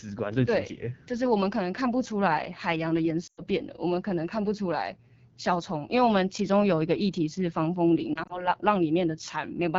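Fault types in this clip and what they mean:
AMR wideband (HD Voice) codec: The speech runs through the wideband mobile codec at 8.85 kbit/s, one of its lowest rates. Below 6.4 kHz a pulse-excited vocal tract model rebuilds the sound. Shaped noise fills the band up to 7 kHz. At this rate the model cannot track the voice closely. The result is a plainly rough, raspy texture through the whole clip. It is clearly audible on every stretch of speech.
lost AMR speech frames: Some coded speech frames failed their checksum. The decoder then guessed the missing audio by repeating the last good pitch and vocal tract settings at falling gain. At 3.27 s a solid 100 ms run drops out. The sound smears briefly and fades out quickly, as wideband concealment does. From 8.14 to 8.49 s three single 20 ms frames go missing. They give short dips and warbles rather than a gap.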